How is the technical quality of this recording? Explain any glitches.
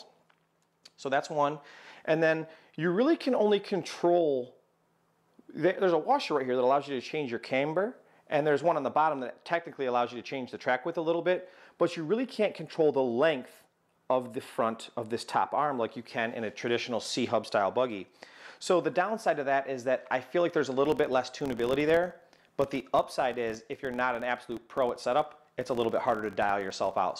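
The recording has one fault in its final section. From 20.85 s to the end, the filter restarted on every block: it dropped its stored state at each block boundary and began again from silence. Each restart leaves a small transient, producing a buzz at about 43.1 Hz, which fits a 1024-sample block. The buzz rises and falls with the sound's level.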